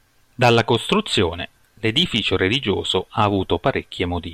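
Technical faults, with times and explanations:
Nothing stood out as a technical problem on listening to this speech recording.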